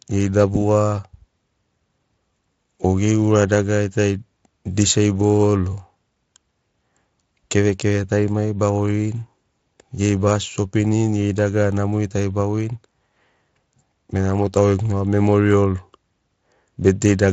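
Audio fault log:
Nothing to log for this speech: the Speex coding underneath sits at a fairly generous setting and leaves little, if anything, for the ear to catch.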